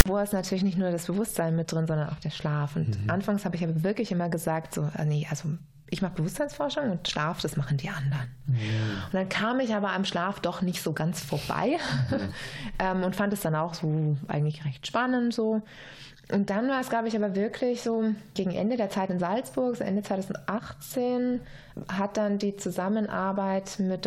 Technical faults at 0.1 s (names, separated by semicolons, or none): file tags played as audio